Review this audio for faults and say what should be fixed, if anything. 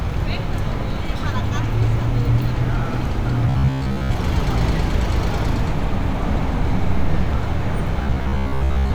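Robotic sound from repeated short buffers at 3.47–4.16 s and 8.03–8.94 s: a rigid 66.8 Hz buzz replaces most of the sound, likely from one 15 ms block looping during audio starvation. Enlarge the playback buffer or jitter buffer so new audio always arrives before the current block runs out.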